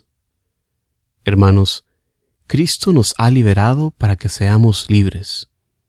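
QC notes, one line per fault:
No faults heard anywhere in this speech recording.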